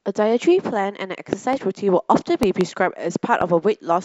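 Loud pops occur three times in the speech: a double pop between 1.33 and 1.55 s, another double pop between 2.43 and 2.63 s, and a single pop at 3.41 to 3.44 s. Each peaks around 15 dB above the speech, which continues underneath. The likely cause is a sudden voltage step or pulse, such as static or a switching glitch, entering the chain. Later stages shape it into a sharp thump.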